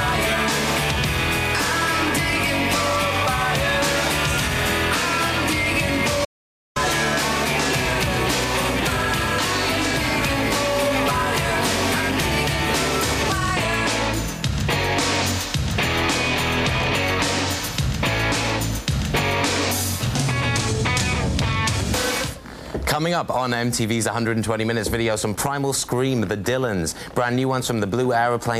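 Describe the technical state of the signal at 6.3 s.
At 6.3 s you're inside an audio dropout to silence, running 6.25 to 6.76 s: the sound cuts to silence for about half a second, likely a lost input link.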